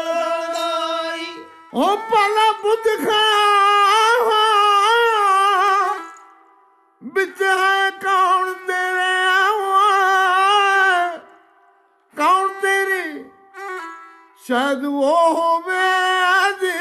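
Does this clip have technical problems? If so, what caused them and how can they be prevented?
No, there are no technical problems to report here.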